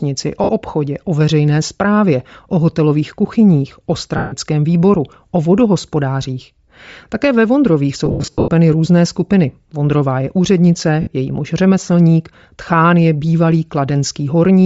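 Throughout the speech there is a breathy, grainy edge on the upper frequencies, with the top of the band thinned out and partly replaced by a noise-like texture. This is plainly audible and points to Bluetooth LC3 compression at a low rate, likely around 32 kbps with 10 ms frames, where the encoder discards much of the high spectrum and the decoder fills the gaps with shaped noise.

Lost LE Audio frames then break the sound four times. The first, from 0.44 to 0.49 s, lasts 50 ms. The second, from 4.17 to 4.34 s, lasts 150 ms. Between 8.06 and 8.48 s, 320 ms of audio is lost in scattered gaps across about 420 ms, the longest run roughly a tenth of a second. The last, from 11.01 to 11.07 s, lasts 60 ms. In each gap the decoder repeats the last spectrum with randomised phase, so the sound turns into a noisy smear, and the longer gaps fade toward silence before the signal returns.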